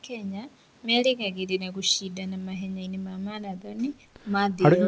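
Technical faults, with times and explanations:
The speech comes over a working WebRTC call path with no technical faults, its band ending at 8 kHz in a way that fits the G.722 wideband codec at 64 kbps.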